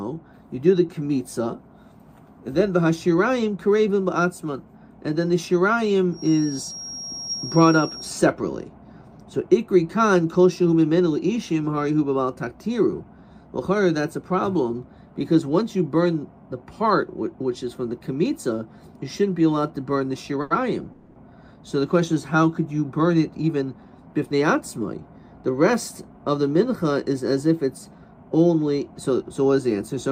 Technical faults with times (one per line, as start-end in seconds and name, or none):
6.08-8.23 feedback whistle
20.41-20.53 short stall from a late packet
20.92-21.18 call audio freeze
22.99-25.01 jitter buffer speed-up